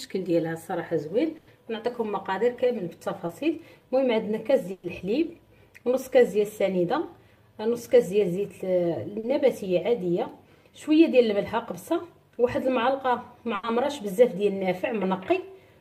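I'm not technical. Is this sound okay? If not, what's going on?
No, there are two kinds of dropout in it.

The first is a burst of packet loss, at 1.37 to 1.49 s, 4.71 to 4.85 s and 13.55 to 13.65 s. Each time, a run of data was lost on its way or arrived too late to play. The receiver stretched the last bit of sound to cover a gap of about 100, 120 and 80 ms, letting it fade. You hear a held buzz or fading hiss, then the sound jumps ahead, with that stretch missing.

The second is short concealed packet loss, at 3.27 to 3.31 s and 9.19 to 9.25 s. Here the gaps are tinier, about 20 and 40 ms. The receiver patched each one by continuing the sound just before it, then blended back into the real audio. The result is a quick smear or wobble, and a very short sound at that point can drop out entirely.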